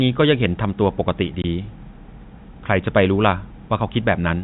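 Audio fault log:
1.42–1.44 s, packet loss filled with silence: The speech drops out completely for 20 ms. The gap matches one packet's worth of audio, which points to a single lost packet. The receiver had nothing to play, so it inserted digital silence. The waveform jumps abruptly to silence and back with hard edges. The band-limited telephone sound of the G.711 coding carries on around the hole.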